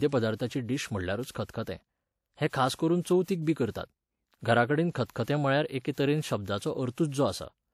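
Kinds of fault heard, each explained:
Pre-echo: a transform codec spreads its quantisation noise across a whole block, so when a sharp attack sits late in that block, the quiet stretch just before it gets filled with noise meant for the loud part. Here you hear five short hissy smears ahead of attacks in the speech, each roughly 40 to 60 ms, around 1.31, 2.75, 3.23, 5.24 and 5.92 s. One sits just after "करतात घरा कडेन", and those onsets come across softened rather than crisp.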